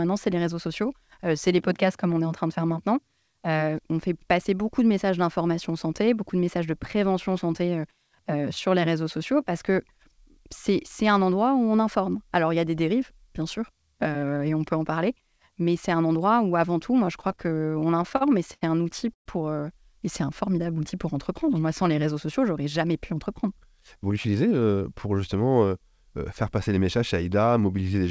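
Speech heard through a call path that carries nothing above 8 kHz, which fits a G.722 wideband stream, with four timing faults. From 17.06 to 18.63 s there are repeated stalls (stutter): the jitter buffer kept running dry, so the receiver stretched the last sound over a run of brief gaps, the longest about 77 ms, adding about 271 ms in total. Nothing drops out, but the sound drags and judders. A single freeze would instead be one longer hole. At 19.14 to 19.28 s comes a call audio freeze: 120 ms of silence, after which the sound resumes exactly where it stopped. The likely cause is packets held up in transit, emptying the buffer and pushing the playout delay back by 120 ms. Unlike the stutter, this is one clean gap rather than many filled ones. From 19.92 to 20.75 s a jitter buffer slow-down plays the audio at about 93% speed, repeating single pitch periods to rebuild a reserve and adding about 66 ms. 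Sounds are drawn out at unchanged pitch, with no gap, which separates it from a freeze. From 22.66 to 24.52 s a jitter buffer speed-up runs at about 107%, trimming small pitch-period pieces to shed excess delay, around 150 ms in all. The speech sounds hurried but keeps its pitch, which rules out a simple playback-rate change.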